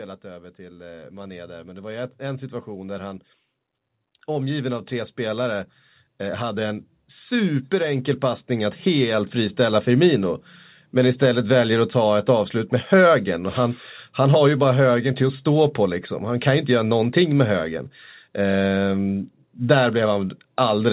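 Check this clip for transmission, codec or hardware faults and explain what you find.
The problem here is automatic gain control, which audibly ramps the level upward twice in the speech.

Automatic gain rising occurs from 0.22 to 3.29 s, climbing about 7 dB, and again from 4.27 to 9.9 s, climbing about 10 dB. The gain control judged the input too quiet and raised its gain slowly, so voice and background noise swell together. On a waveform the envelope widens steadily across each stretch. On a spectrogram every band, including the noise floor between phrases, brightens together.

Content stops at 4 kHz throughout. That band limit comes from the call path, which points to a G.711 mu-law codec running at 64 kbps.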